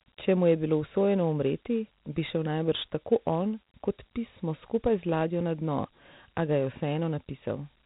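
From start to finish the speech sounds narrow and telephone-like, with nothing above about 3.8 kHz, and a gritty, granular hiss rides along with the voice wherever it is present. This is Dialogic VOX ADPCM coding. Each sample is stored as a coarse 4-bit step from a predicted value, which fits a 32 kbps stream at 8,000 samples a second. The low sample rate removes the upper band, and the crude quantisation leaves that plainly audible grit.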